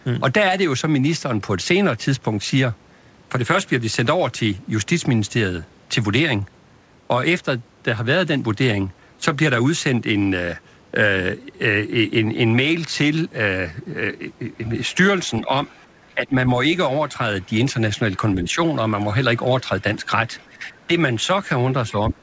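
From 14.66 to 16.14 s, and again at 17.42 to 17.94 s, faint speech that isn't the main talker's sits far underneath, about 35 dB down. That's the other side's voice leaking through, likely loudspeaker echo the canceller didn't fully remove. Overlapping that, from 15.4 to 18.59 s, the main talker dips by up to about 10 dB in short patches adding up to well under a second. This is speech suppressed in double talk, likely with the canceller turning everything down while both sides talk. It gets much heavier from 19.69 s to the end, with drops of roughly 30 dB. During that stretch the leaked voice returns at 19.8 to 20.85 s, still about 35 dB down, and then more prominently at 21.89 to 22.11 s, only about 20 dB under the speech.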